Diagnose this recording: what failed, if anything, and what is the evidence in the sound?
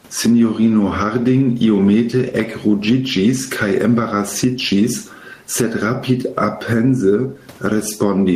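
Gain pumping runs through the whole recording. The likely cause is input gain set far too high at the microphone stage, with a fast limiter or compressor in the processing clamping it down on every loud syllable. The room background sits about 43 dB under the speech; between phrases the gain recovers and each burst of speech then ducks it again, a swing of roughly 10 dB. Speech levels sound flattened and squashed throughout.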